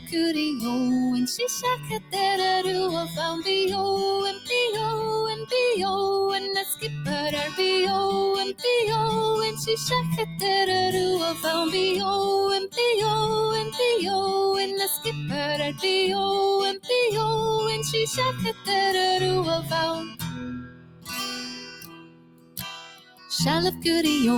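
A speech-oriented noise suppressor has been left running on this non-speech audio. It treats sustained material and tails as noise, so the level swings by roughly 10 dB and the sound pumps and thins. Sound cut by the noise suppressor is heard at 0.0–0.15 s (about 14 dB down), 1.76–5.53 s (about 17 dB), 6.75–7.59 s (about 11 dB), 9.57–10.43 s (about 6 dB), 12.68–13.75 s (about 15 dB), 14.98–16.9 s (about 17 dB), 18.34–18.69 s (about 13 dB) and 19.61–23.85 s (about 18 dB). In these stretches, held or decaying sound sinks while sharper onsets pass. The final span is the longest, with about three seconds pulled down in total. A DC offset is also present throughout: the waveform sits off zero by a constant amount. It is inaudible as such, but it wastes headroom and shows as steady energy at the bottom of the spectrum.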